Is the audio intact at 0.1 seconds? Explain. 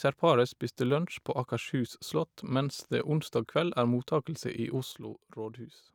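Yes, the speech at 0.1 seconds is intact, with no audible fault at that moment.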